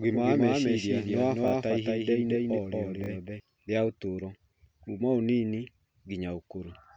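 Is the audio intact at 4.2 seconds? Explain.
Yes, at 4.2 seconds the speech runs cleanly, with no dropout, click, distortion or other fault at that point.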